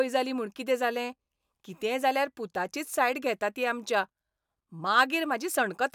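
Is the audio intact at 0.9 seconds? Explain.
Yes, at 0.9 seconds the speech carries on intact, with no audible fault at that moment.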